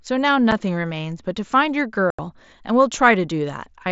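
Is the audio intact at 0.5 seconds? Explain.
No. At 0.51 s there is unconcealed Bluetooth headset packet loss. A voice packet between the headset and the phone never arrived, and the link filled the gap with silence or an idle pattern instead of covering it. The hole lasts about 7.5 ms, which fits one lost mSBC frame. It sounds like a brief dropout with hard edges in the speech. The light graininess of the mSBC codec continues around it.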